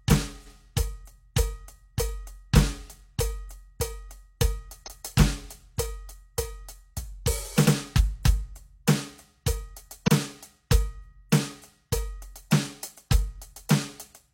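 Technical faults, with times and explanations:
0.42–0.52 s, 4.83–5.02 s, 7.62–7.71 s and 10.03–10.09 s, repeated frames: blocks of compressed music were delivered twice, so the decoder replays about 93, 186, 93 and 46 ms, which fits whole frames near 46 ms. Each repeat stutters and lengthens the track.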